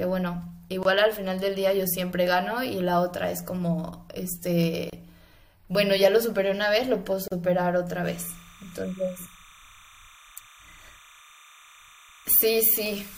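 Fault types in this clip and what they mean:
gap at a join of encoded pieces: Separately encoded segments were butted together without trimming each encoder's start-up delay and final-frame padding, so brief silences cut into running speech. There are three here: 0.83 to 0.85 s (22 ms), 4.90 to 4.93 s (30 ms) and 7.28 to 7.32 s (37 ms). On a waveform each is a flat stretch with steep, slightly smeared edges. On a spectrogram it is a thin blank vertical strip across all frequencies, with speech resuming exactly where it stopped.
timecode bleed: Linear timecode from a neighbouring track or cable leaks into the recording from 8.05 s to the end. Its square wave flips between tones near 1 and 2 kHz and is heard as a steady chirping warble roughly 25 dB below the speech, with a rhythm that fits 30-frame-per-second code. A spectrogram shows persistent horizontal lines near 1 and 2 kHz, with odd harmonics above, running unbroken through pauses. 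The waveform gains a fine, buzzy underlayer.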